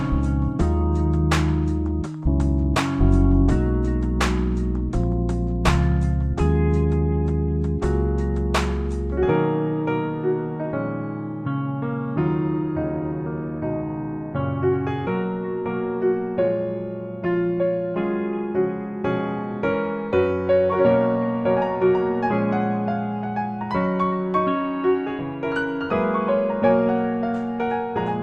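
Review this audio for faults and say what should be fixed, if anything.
No faults found, so nothing needs fixing.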